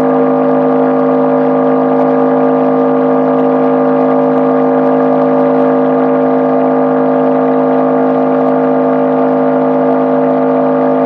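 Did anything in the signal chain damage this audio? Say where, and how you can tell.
Yes. There is hard clipping throughout the clip. It most likely happens at the converter or at a sample-format conversion, where the level was pushed about 2 dB past full scale. Only a tiny fraction of samples go over, so there is no constant fuzz. Instead, the loudest peaks get a brief, brittle crackle. Those peaks are sliced flat rather than rounded. The flat tops add high harmonics, and that is what makes each peak sound edgy.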